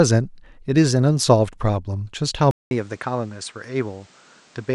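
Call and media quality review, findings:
Input likely switched to a poorer device at 2.51 s, through end. 200 ms dropout at the handover. The new path passes nothing above 9.4 kHz, so the speech turns duller, about 10 dB quieter, with a faint new noise floor underneath.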